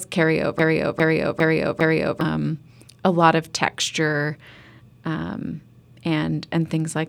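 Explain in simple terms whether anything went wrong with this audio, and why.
From 0.59 to 2.21 s, a 0.4-second scrap of speech repeats four times: a broken-record loop, likely the stream stalling and resending its last piece.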